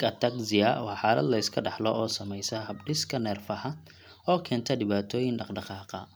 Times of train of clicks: none

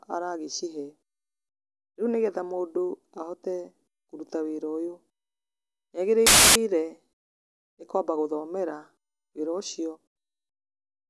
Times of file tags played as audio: 6.27-6.55

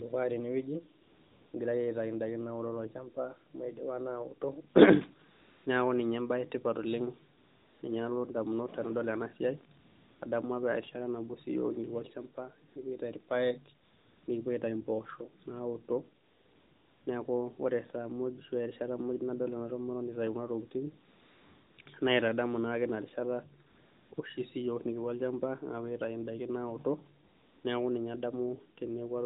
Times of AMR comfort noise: 1.02-1.54, 5.32-5.66, 7.38-7.82, 9.80-10.22, 12.70-12.76, 13.84-14.28, 16.24-17.06, 21.14-21.86, 23.68-24.18, 27.24-27.64

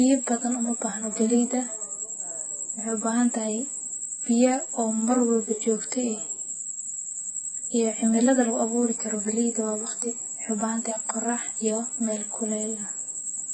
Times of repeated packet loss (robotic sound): none

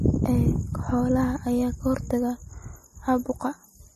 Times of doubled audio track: none

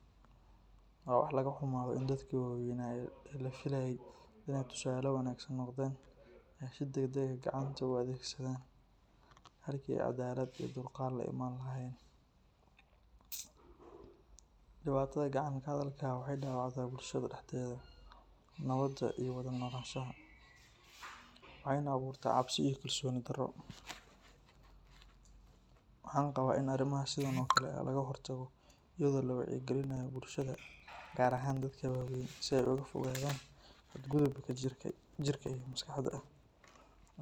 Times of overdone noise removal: none

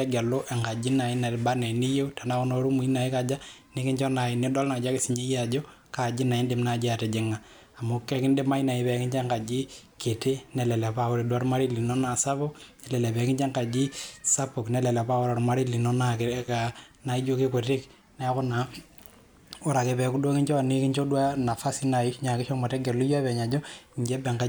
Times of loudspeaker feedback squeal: none

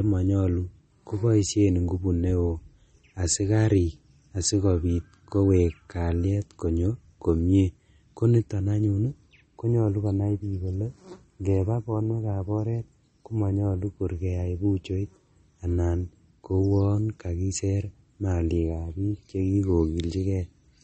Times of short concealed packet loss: none

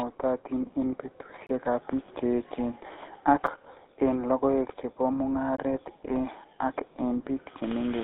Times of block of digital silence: 1.47-1.49, 3.47, 5.57

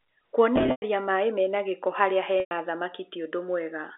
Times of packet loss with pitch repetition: 0.56-0.82, 2.40-2.51

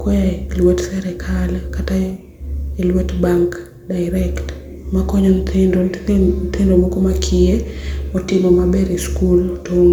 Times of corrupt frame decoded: none

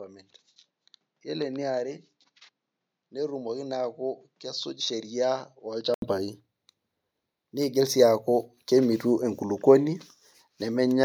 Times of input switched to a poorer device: 0.00-6.02

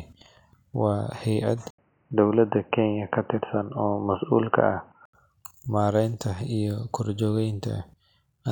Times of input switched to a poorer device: 1.70-5.13

